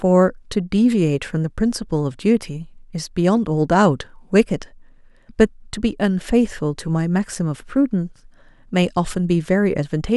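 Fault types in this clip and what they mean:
No technical faults can be heard anywhere in this speech recording. Nothing in the audio calls for an entry under any fault type.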